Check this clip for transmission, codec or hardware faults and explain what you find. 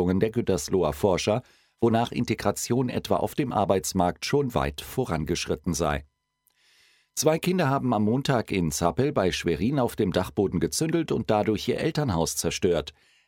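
Nothing wrong can be heard in this speech recording.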